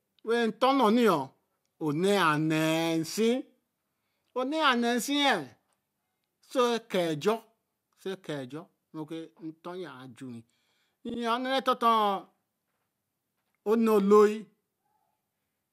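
Speech, with a repeated-frames fault at 11.09 to 11.19 s: a 48 ms slice of sound plays twice more than it should, producing a brief stutter and adding 96 ms to the audio. The repeated stretch fits two compressed frames being written or sent again, so the decoder replays them. On a spectrogram the same 48 ms pattern appears three times side by side. The waveform shows matching copies of the same segment in a row.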